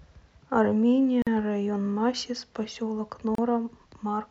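At 1.22 s the speech drops out for about 47 ms, ending at 1.27 s, and at 3.35 s it drops again for about 31 ms, to 3.38 s. Both are a gap at a join of encoded pieces: separately encoded segments were spliced without trimming the encoder's leading silence and trailing frame padding. Each gap is heard as a brief hole, and then the speech resumes exactly where it stopped. On a spectrogram each shows as a narrow empty vertical band; on the waveform, a flat stretch with slightly softened edges.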